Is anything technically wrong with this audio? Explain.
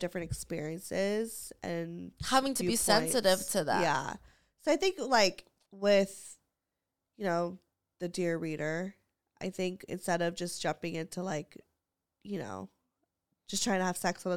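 No, nothing technical stands out here; the speech comes through without any problems worth pointing to.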